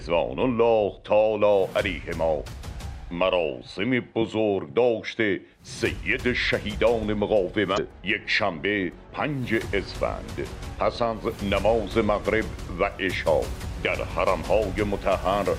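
At 7.74 to 7.78 s and again at 11.29 to 11.33 s, brief glitches of about 40 ms, heard as a chirp, squawk, click or short hole, mark damaged data in the compressed stream: corrupted frames make the decoder misread them and lose sync, searching for the next valid frame header.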